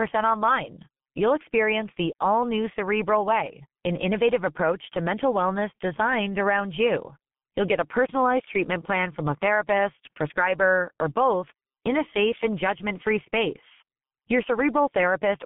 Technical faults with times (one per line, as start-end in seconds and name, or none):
0.00-15.46 G.723.1 codec